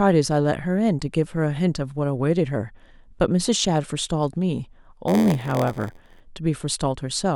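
Block size mismatch (padded) runs from 5.07 to 6.21 s in this speech. One stage hands over blocks shorter than the next stage expects, and the shortfall in each block is filled with zeros, which fits a 512-sample read block. The repeated short silences produce a buzz at 86.1 Hz, and the speech slows to 0.938 of its normal speed while its timbre stays about the same.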